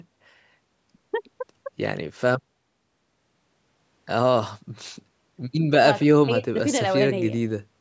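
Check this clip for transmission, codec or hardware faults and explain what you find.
Nothing wrong found in transmission, codec or hardware: the speech shows only the expected call microphone processing, with its bass roll-off and a band that stops at 8 kHz.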